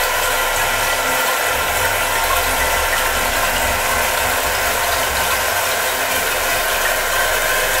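No technical faults are audible anywhere in the recording.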